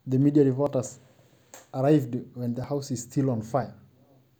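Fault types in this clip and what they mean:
Audio missing between chunks at 0.67, 2.64 and 3.63 s: the speech jumps forward abruptly at each point, with a sliver of roughly fifteen milliseconds gone and the two sides butted together with no gap. The skips fall on whole-second spacing, which fits a process handling the audio in 1.0 s chunks. The likely cause is that a small piece is lost each time one chunk is closed and the next is opened.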